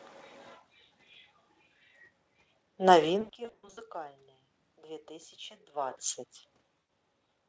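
From 3.21 to 3.81 s, VoIP packet loss concealed by the speech codec breaks the sound up repeatedly. About 320 ms goes missing across 560 ms, in bursts up to 80 ms. At 6.79 s a single 100 ms gap follows. Each time the decoder stretches its last pitch and filter into a buzzy tone or coloured noise that fades. On a spectrogram this shows as smeared, repeated harmonic bands. The waveform shows a decaying, overly regular pattern, with weak level just after each gap.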